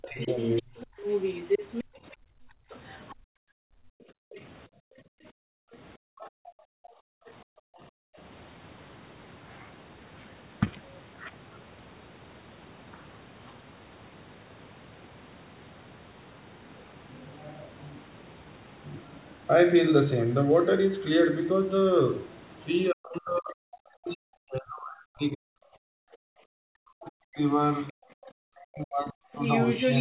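Speech recorded over a call runs through with a narrow telephone bandwidth topping out near 4 kHz, consistent with G.711 mu-law at 64 kbps. Several faults stand out. From 0 to 7.56 s, and again from 22.91 to 29.40 s, the talker's voice dips, thins and breaks up in pieces, at its worst falling by around 40 dB. That adds up to roughly a second in the first stretch and about five in the second. This is speech suppressed in double talk: both ends were likely speaking at once, and the echo canceller, unable to tell the local talker from loudspeaker echo, turned everything down. Overlapping that, a second voice is audible underneath. From 0.21 to 4.42 s and from 27.74 s to the end it sits only about 5 dB below the talker. At 24.08 to 24.14 s there is a brief scrap about 25 dB down. That is the other side's voice leaking through: the far end played on a loudspeaker likely reached the microphone and was not fully cancelled. 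The room sound also drops away, by about 40 dB at its deepest, across 1.84 to 8.17 s for about four seconds in total, and for about 0.3 s within 26.05 to 28.05 s. It comes back each time the canceller releases, which marks background gated by the echo canceller clamping the microphone while the loudspeaker was active. At 4.14 to 4.23 s a sound is held slightly too long, a 67 ms smear with nothing actually lost. This short stall from a late packet happens because the jitter buffer ran dry and the receiver stretched the last audio until the packet arrived, adding 67 ms of delay. Between 19.56 and 20.73 s the speech hurries forward at about 106% speed with unchanged pitch, and roughly 70 ms is trimmed out. That is a jitter buffer speed-up: the receiver was holding surplus audio and cut out small pitch-period slices repeatedly to bring the delay back down.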